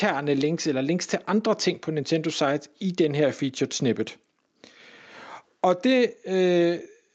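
Nothing goes wrong anywhere in this speech clip; it simply sounds like ordinary call audio, with the top end stopping at about 8 kHz, as you'd expect once a call codec has had its say.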